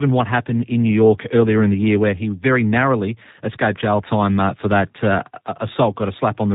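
Tandem speech coding runs the whole way through: the speech sounds coded twice over, rough and warbly, with nothing above 3.8 kHz, which fits an ADPCM leg feeding a low-rate CELP coder.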